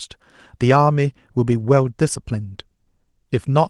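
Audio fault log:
No faults detected anywhere in the speech.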